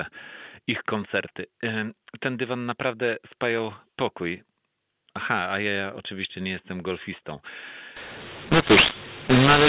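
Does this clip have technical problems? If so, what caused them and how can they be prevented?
Yes. From 7.97 s, just after "oczywiście nie jestem golfistą", to the end of the clip, the audio was coded as A-law but decoded as mu-law, so the mu-law and A-law are mixed up. Each 8-bit code lands on the wrong logarithmic step, so sample levels are scrambled: some too loud, others too soft, and near-silent samples are pushed well up. The speech turns harsh and distorted, and its gaps fill with noise rather than falling quiet. The band stays limited to 4 kHz, as expected from G.711 telephone coding at 8 kHz. To prevent this, signal or configure the G.711 law explicitly at both ends (PCMA for A-law, PCMU for mu-law) so the decoder always uses the same law as the encoder.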